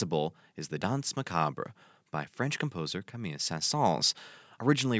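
Nothing goes wrong in this bit of speech: it has simply passed through a call's microphone processing, which trims the deepest bass and leaves nothing above 8 kHz, and that's just how such a path normally sounds.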